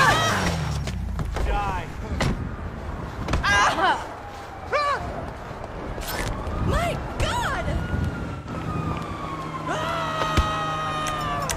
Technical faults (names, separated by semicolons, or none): AAC frame loss with concealment